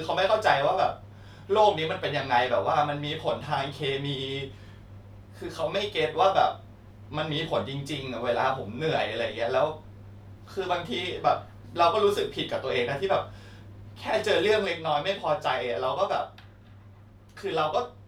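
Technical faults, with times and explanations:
14.65 to 18.08 s, sudden gain jump: The level drops by about 4 dB in one step and stays down to the end. Speech and background noise fall together, with no fade. The likely cause is a gain setting applied without a ramp.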